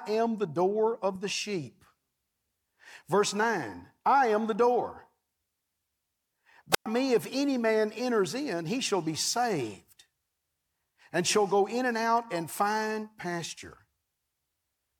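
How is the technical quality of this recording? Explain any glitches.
There's one glitch worth flagging: a wireless microphone squelch dropout at 6.72 to 6.86 s. The radio link fades, hiss rises briefly, then the receiver's squelch mutes the output for about 110 ms, leaving a near-silent hole before the speech comes back.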